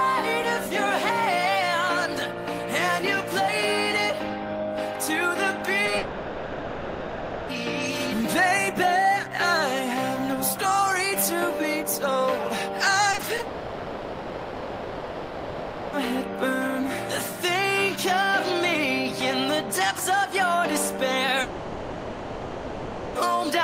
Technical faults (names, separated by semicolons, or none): short concealed packet loss; long network dropout; repeated packet loss (robotic sound)